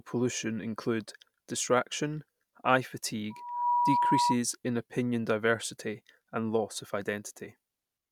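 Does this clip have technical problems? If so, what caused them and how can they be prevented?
Yes. A loudspeaker feedback squeal starts at 3.3 s, just after "pollution include distraction eye", and lasts until 4.38 s, ending before "in opinion diversity and". A steady tone near 966 Hz swells up in under half a second and settles somewhat louder than the speech. The microphone was picking up the loudspeaker it was feeding, and around 966 Hz the loop gain went above one, so that frequency fed on itself. To prevent it, keep the microphone out of the loudspeaker's coverage, lower the monitor gain, or notch the system's response near 966 Hz.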